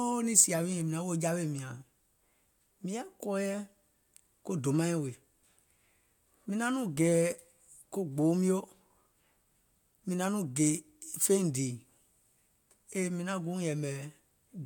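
No technical faults can be heard anywhere in the speech.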